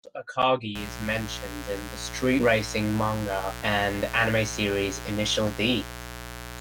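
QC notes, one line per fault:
0.75 s to end: mains buzz. A steady, raspy buzz enters at 0.75 s and runs to the end of the clip. It sits only about 10 dB below the speech, so it is plainly audible from there on. Its fundamental is 60 Hz. Sharp switching spikes, twice per mains cycle, leak into the signal path. That is why the buzz is rough and edgy rather than a pure hum. Its harmonics reach well into the kilohertz range.
2.39–2.44 s and 3.61 s: compressed frames skipped. At each point the audio jumps forward, and a short stretch of speech is missing. The first gap loses roughly 70 ms, which points to a few 20 ms frames. The second loses about 300 ms, closer to fifteen frames. The decoder never played those frames.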